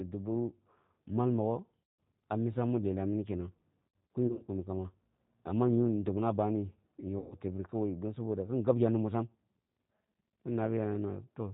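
Speech, and the whole thing has that slightly rough, synthetic edge of the G.729 codec running at 8 kbit/s. Nothing above 4 kHz comes through, so it sounds dull and narrow. Each 10 ms frame is rebuilt from a vocal tract filter, a pitch predictor and a handful of pulses, which is where the plainly audible roughness comes from. On top of that there's VoIP packet loss concealed by the speech codec, in three spots. The first is at about 1.86 to 1.91 s, just after "mal mogho" and before "ah misa mi lelah", covering about 150 ms of lost audio. The second is the messiest, 4.07 to 4.50 s, between "mi lelah mina kenang" and "kamba amma yu dobna". There the losses are scattered over about 600 ms in short runs of up to 60 ms. The last is at 7.19 to 7.36 s, about 120 ms of loss. In each gap the decoder keeps extrapolating from its last pitch and filter settings while turning the gain down, so the sound smears into a fading buzzy tone or coloured noise. 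Because each frame builds on the previous one, the audio stays weak or distorted for a moment after it resumes.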